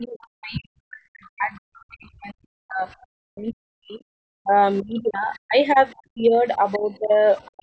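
From the start to the end at 7.62 s, the speech keeps dipping, thinning and breaking into pieces, altogether for about five seconds, with the deepest drops around 40 dB. This is speech suppressed in double talk: with both sides talking, the echo canceller likely mistook the talker for loudspeaker echo and turned everything down.

A faint second voice also surfaces in short scraps at 0.22 to 0.27 s, 1.55 to 1.78 s, 4.76 to 5.37 s, 5.97 to 6.02 s, 6.73 to 6.77 s and 7.42 to 7.51 s. It mostly sits about 30 to 35 dB below the speech, but reaches about 20 dB below at 6.73 s. This is the other side's voice leaking through, likely loudspeaker playback the canceller failed to remove from the microphone.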